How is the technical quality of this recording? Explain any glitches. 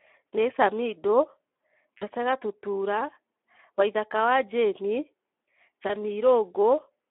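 The recording has noticeable technical flaws: low-rate codec coloration throughout, plus two brief concealed dropouts.

Speex codec damage runs throughout. The narrow 250 Hz to 3.4 kHz band and hoarse, noisy texture, not warbling, suggest starved CELP excitation, which fits roughly 11 kbps.

VoIP packet loss concealed by the speech codec occurs at 1.97 to 2.04 s (about 40 ms lost) and at 5.87 s (20 ms). The decoder extends the last sound into a fading buzz or coloured noise instead of leaving silence, then takes a moment to recover.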